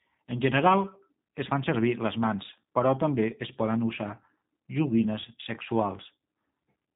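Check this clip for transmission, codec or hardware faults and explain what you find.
One codec fault runs through the whole clip. G.729 coding: the speech is rebuilt from a vocal tract filter, a pitch predictor and sparse pulses, which fits an 8 kbit/s codec. Nothing passes above 3.8 kHz, and the speech sounds plainly rough and synthetic.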